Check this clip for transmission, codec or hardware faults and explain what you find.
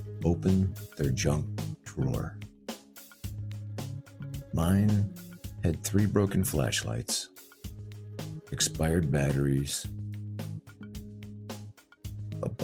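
No transmission, codec or hardware faults turn up in this clip.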